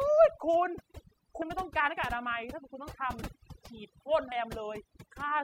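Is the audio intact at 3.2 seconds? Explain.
No. Compressed frames are skipped at 3.22 s. Around twenty whole frames of the compressed speech were never played, so the audio jumps ahead by about half a second, which fits a frame length of about 26 ms.

Overdone noise removal also affects this moment, as it does the whole clip. The reduction is set too strong, so frequency bands near the noise estimate are pushed down or shut off along with quiet parts of the speech. The background drops and breaks up into twinkling specks.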